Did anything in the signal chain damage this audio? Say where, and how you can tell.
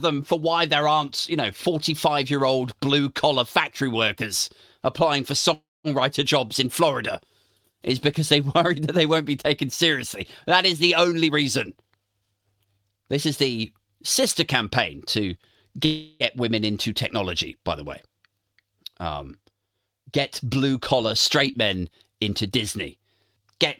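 Yes. At 5.53 to 5.87 s the sound stalls and is replaced by about 0.31 s of fill that fades into roughly 0.21 s of silence. At 15.85 to 16.23 s a similar stall lasts about 0.35 s, with the fill never reaching silence. In both cases the audio resumes exactly where it stopped, with nothing skipped, so each pause simply pushes everything later. That pattern is likely a call audio freeze: packets were delayed on the network, the jitter buffer ran dry, and the receiver extended the last sound until data arrived.

The jitter buffer speed-up shows up three times. From 11.27 to 12.79 s the sound runs at about 120% speed while the pitch stays unchanged, and roughly 0.3 s is dropped in total. Shorter bursts follow at 22.15 to 22.51 s, at about 121%, and at 22.96 to 23.49 s, at about 117%. This is the receiver draining a backlog in its buffer by cutting out many short pitch-period-length pieces, which makes the sound hurried without shifting it up in pitch.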